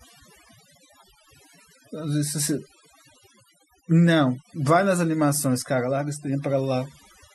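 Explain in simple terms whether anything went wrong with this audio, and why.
Something did go wrong: overdone noise removal, across the whole recording. A noise cleaner was set too strong. It shut off parts of the sound along with the noise. The gaps turn quieter with twinkling specks.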